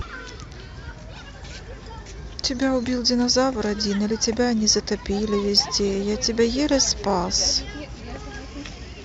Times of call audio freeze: none

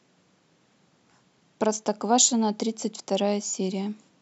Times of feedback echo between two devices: none

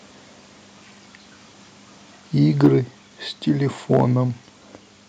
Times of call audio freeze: none

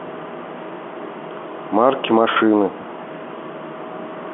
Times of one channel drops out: none

